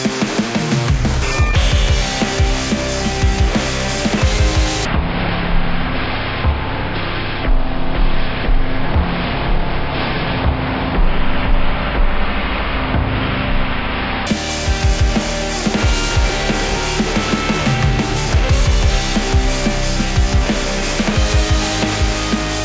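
From 4.85 s to 14.27 s, a wrong sample rate fault slows the sound to one third speed. Pitch falls about 19 semitones with it. Both shift by the same ratio, which fits 48 kHz material played at 16 kHz without conversion. Everything turns deep, dragging and sluggish.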